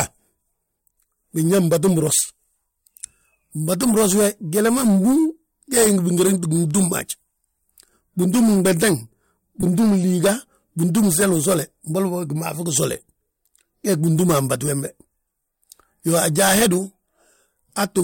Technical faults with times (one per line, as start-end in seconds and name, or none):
9.61-9.63 lost LE Audio frames